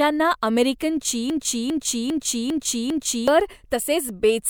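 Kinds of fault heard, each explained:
Broken-record loop: a 0.4 s piece repeats five times, back to back, from 1.30 to 3.28 s. Likely a stall resending one fragment, so that stretch's audio is lost.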